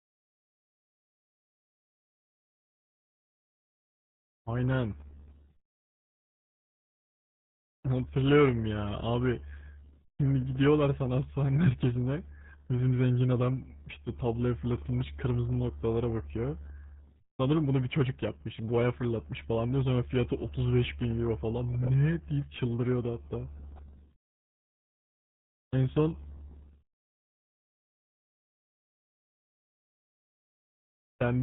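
From start to finish, the speech carries RealAudio 14.4 codec damage. Nothing passes above about 3.8 kHz. The heavy, gargly muffling points to a very low bitrate near 8 kbit/s.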